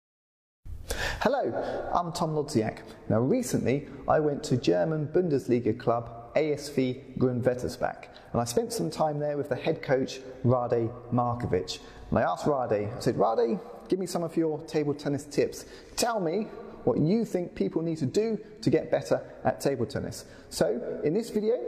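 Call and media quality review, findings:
No faults found on review: signal path intact, with no audible defects attributable to capture, transport or playback.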